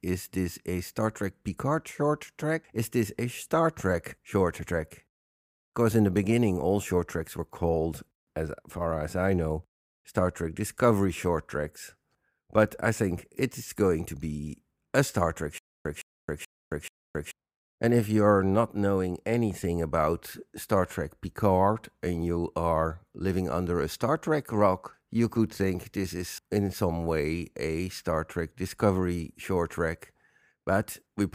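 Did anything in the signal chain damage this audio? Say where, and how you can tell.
Yes: stutter with silent gaps, 15.58–17.31 s. A 162 ms fragment replays four times, each followed by 270 ms of silence, likely from a stalled playback buffer.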